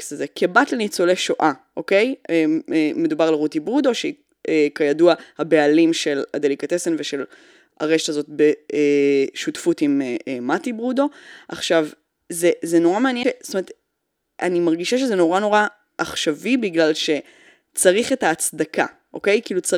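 It's a speech clip with a CD skip at 13.23 s: you get a tick and a mute of roughly ten milliseconds, then playback resumes somewhere else on the disc. That's the laser getting knocked or tripping on a flaw and jumping to another turn of the spiral.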